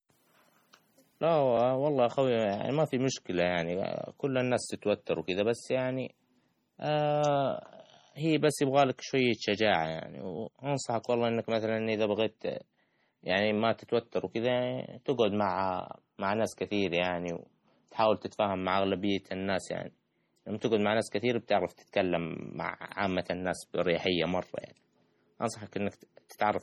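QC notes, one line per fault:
Throughout: heavy MP3 compression is the likely cause of the watery, swirling texture. Starved of bits, the encoder drops weak frequency lines that flicker on and off between frames, which points to an encoding around 32 kbps.
26.29 s: pre-echo, where a brief hiss runs about 12 ms ahead of a sharp attack. The codec spread quantisation noise across its whole block, so noise sized for the loud onset leaked into the quiet moment before it, softening the attack.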